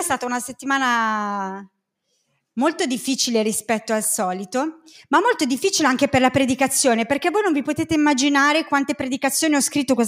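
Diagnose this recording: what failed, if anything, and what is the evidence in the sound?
Nothing failed: the sound gives no evidence of any fault.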